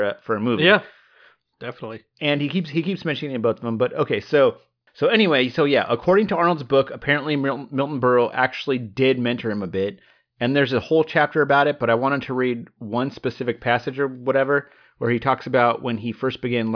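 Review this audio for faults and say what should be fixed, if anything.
Nothing needs fixing: the speech signal holds steady, with no audible technical faults anywhere in the recording.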